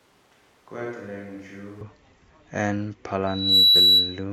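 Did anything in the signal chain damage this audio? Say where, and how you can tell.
Yes. Until 1.81 s the speech is hollow, roomy and about 10 dB quieter, with noise only about 25 dB below it. This is likely a switch to a distant microphone at capture, showing as a smaller waveform and a raised spectrogram floor.

A loudspeaker feedback squeal runs from 3.27 to 4.24 s. A 3.9 kHz tone swells over about a third of a second to about 10 dB above the signal, drawing one bright horizontal spectrogram line, as the acoustic loop exceeds unity gain.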